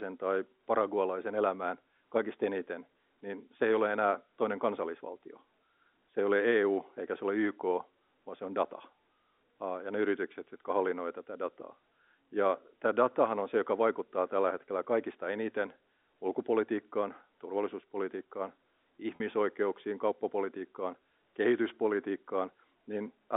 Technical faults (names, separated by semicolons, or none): packet loss with pitch repetition